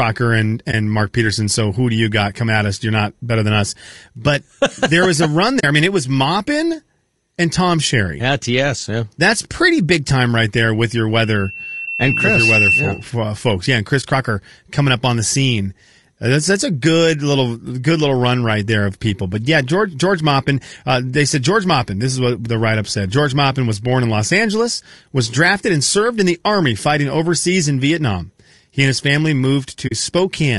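All the way through, the speech has a rough, grainy edge, with noise filling in between the harmonics and a top end that sounds thin and a bit synthetic. That's most likely low-delay AAC compression, the AAC-ELD kind used on video calls. Its short frames can't separate pitch harmonics cleanly, and the damage is plainly audible here, which fits a bitrate around 32 kbps.

At 0.71 to 0.74 s there's the first AAC frame loss with muting. The sound fades out and back in over about 20 ms, leaving a brief dip. That fits a single lost frame whose spectrum the decoder zeroed, with the overlapping windows smoothing the edges. The same thing happens at 5.59 to 5.64 s, between "there was a run" and "I mean it was". This gap is about 40 ms, which points to two frames lost back to back.

Right after "right there with your", from 11.22 to 13.13 s, a loudspeaker feedback squeal comes in at 2.7 kHz. The mic is picking up the speaker it feeds, and at that one frequency the loop gain tops one. 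The tone swells over roughly a second and a half until it sits a few dB above the speech.

Two more muted dropouts follow. One at 14.01 to 14.04 s lasts about 20 ms. The other, at 29.87 to 29.92 s just after "and his family", lasts about 40 ms.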